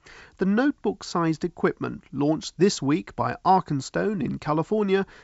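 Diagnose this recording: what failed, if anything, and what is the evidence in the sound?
Nothing stood out on listening to this speech recording, which comes through a G.722 wideband telephone path at 64 kbit/s with its content reaching up to about 7.7 kHz.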